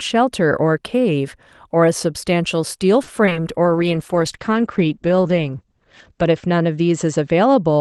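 From 3.03 to 3.41 s the speech breaks up with repeated packet loss. Four short gaps, the longest 40 ms, are each patched by extending the preceding sound, so nearly a third of that stretch is concealment. The result is choppy, robotic speech with pieces missing.

At 3.65 s a call bitrate drop sets in and lasts to the end. The top of the spectrum narrows from 12 kHz to 8 kHz, which fits the Opus encoder being pushed from 32 kbps down toward 12 kbps. The speech turns duller, rougher and watery, worst over the 2.6 s spent at the lowest rate.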